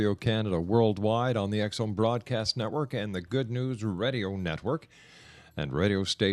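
Nothing in this bit of speech stands out as a technical fault at any point, so there's nothing to flag here.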